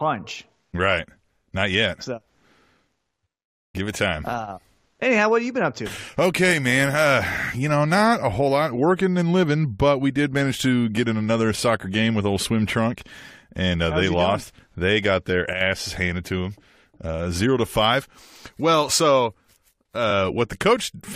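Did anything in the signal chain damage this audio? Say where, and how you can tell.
Yes. From 15.53 to 15.61 s, between "got their" and "handed to them uh", one channel drops out: the speech level falls abruptly by about 6 dB for 80 ms, then recovers. The likely stage is analogue wiring, where a loose connection briefly loses one leg before the mono sum.

At 20.10 to 20.12 s there are repeated frames: a 23.2 ms block of speech plays twice, giving a brief stutter and lengthening the audio by 23.2 ms. The block length fits one 1024-sample codec frame at 44.1 kHz, written or delivered a second time in storage or transmission.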